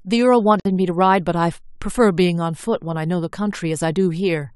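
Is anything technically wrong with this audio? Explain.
Yes. From 0.60 to 0.65 s the speech stops for about 54 ms: a gap at a join of encoded pieces. The pieces, 4 s long, were joined with their encoder delay and end padding left in. Unlike a dropout, nothing is lost: the sound resumes exactly where it stopped, with smeared edges.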